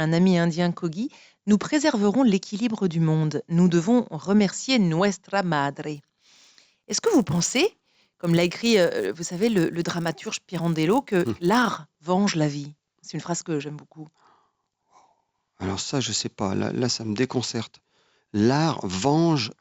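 A speech clip with a resampler restarted on every block, from 5.94 to 11.75 s. The converter treated each 10 ms block as separate and saw false neighbouring samples at every edge. Each edge gets a small error. These repeat at 100 Hz, so they merge into a buzz rather than separate ticks. The buzz follows the speech and disappears in pauses. The damage points to a 16 kHz to 48 kHz conversion.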